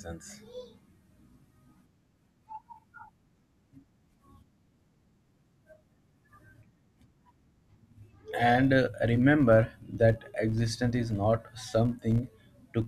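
Filter restarted on every block, throughout the speech from start to finish: the filter loses its memory at each block boundary and starts processing from silence, so every block opens with a small transient. These clicks recur at about 86.1 Hz, which fits a 512-sample buffer, and merge into a steady buzz beneath the speech. The buzz rises and falls with the speech's level, loudest on strong passages and nearly gone in pauses.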